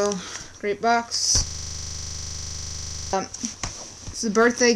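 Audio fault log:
1.47–3.13 s, system hang loop: with the system frozen, the hardware kept replaying one buffer, so a 40 ms slice repeats exactly 42 times, giving a rigid 25 Hz buzzing stutter. The waveform shows identical 40 ms blocks. The spectrogram shows evenly spaced vertical stripes, with harmonics 25 Hz apart.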